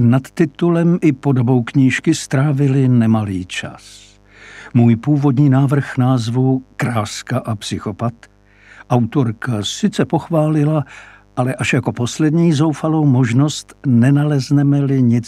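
A steady, raspy mains buzz runs the whole way through, well below the audio, as switching spikes on the 50 Hz supply inject harmonics reaching several kHz.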